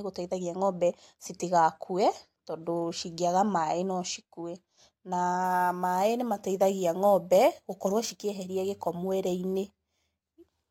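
From 5.44 s to the end at 10.70 s, a crude rate conversion changes the sample rate by picking the nearest existing sample instead of filtering, so some samples are simply repeated on a fixed cycle. The pattern fits a step from 32 kHz to 44.1 kHz. This leaves an error around 25 dB below the speech, heard as a gritty, inharmonic fizz riding on louder and brighter syllables.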